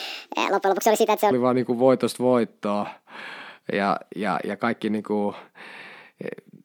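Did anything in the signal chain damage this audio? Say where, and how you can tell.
Yes: section at the wrong speed, 0.00 to 1.31 s. Speech runs 1.58 times fast, about seven semitones high, likely a playback clock mismatch.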